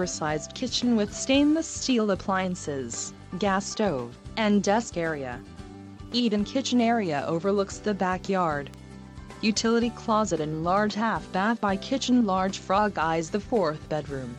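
A single bit error spike sits at 8.74 s. It is one sharp, broadband tick, reaching about -24 dBFS and unrelated to the surrounding audio. A flipped bit in memory or on a digital link pushed three consecutive samples up by a power of two before they snapped back.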